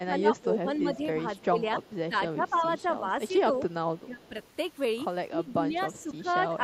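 It's a speech recording, and two related faults run through it, both pointing to a speakerphone-style echo canceller struggling. First, speech suppressed in double talk: the talker dips and thins out in patches from 0.0 to 3.36 s (roughly two seconds of it affected, dropping by as much as about 15 dB), again briefly from 4.04 to 4.35 s where it goes down about 20 dB, and from 5.37 s to the end, with shallower dips of about 10 dB. That pattern likely comes from the canceller hearing both sides at once, failing to tell local speech from loudspeaker echo, and turning everything down. Second, there's an echo leak: a faint delayed copy of the speech trails it by 291 ms, sitting roughly 30 dB under the main level, from 0.35 to 4.48 s and again from 5.99 to 6.31 s. It is likely residual far-end audio from a loudspeaker that the canceller didn't fully remove before sending it back.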